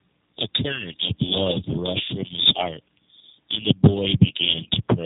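From the first moment to the end, the speech carries tandem speech coding: it sounds like it crossed two low-rate speech codecs back to back, something like an AMR-NB leg and then a G.729A-style coder, the second squeezing audio the first had already mangled. That stacking makes it rougher and more warbly than one codec would, and it's muffled too, with nothing above about 3.8 kHz, which fits narrowband telephone links.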